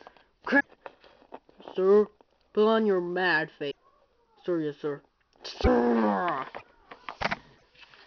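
A likely broken MP3 bit reservoir, with frames missing so later frames borrow the wrong data, leaves brief one-to-three-frame glitches and skips at 0.59–0.66, 3.70–3.76, 5.63–5.68, 6.57–6.62 and 7.56–7.63 s.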